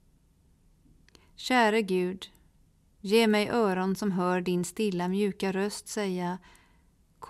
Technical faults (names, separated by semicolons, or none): none